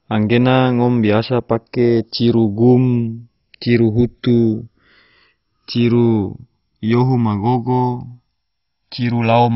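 From the start, the speech has a slow flanging swirl, which is the sign of channels drifting apart. The two sides run on clocks about 150 parts per million apart, so the gap between them creeps up to roughly a millisecond and a half. In mono, that sweeps comb notches through the spectrum.

Across the whole clip, nothing comes through above 5.6 kHz, so it sounds dull, with a gurgly, granular grit and upper bands flickering in and out. That's likely heavy MP2 compression, starving its sub-bands of bits in a way that fits a rate around 32 kbps.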